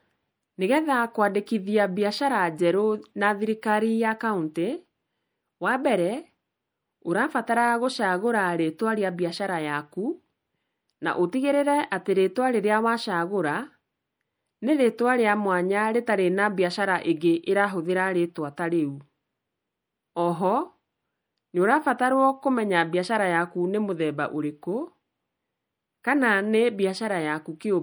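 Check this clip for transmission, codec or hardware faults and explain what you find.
There's one fault, running the whole way through: MP3 compression, likely from a low-bitrate encode around 64 kbps, with the top end cut off and weak detail flickering, giving speech a watery, swirly edge.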